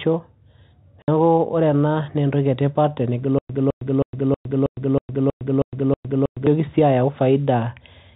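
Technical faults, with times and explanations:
1.02–1.08 s, packet loss filled with silence: a 60 ms hole opens with abrupt edges. The receiver played silence where audio never arrived, and the length fits three 20 ms packets lost together, cut hard out of the telephone-band sound.
3.39–6.47 s, stutter with silent gaps: one 210 ms fragment returns nine times, each followed by about 109 ms of digital silence, repeating every 319 ms. This is likely a stalled stream replaying its last buffer at each retry while the intervening audio is lost.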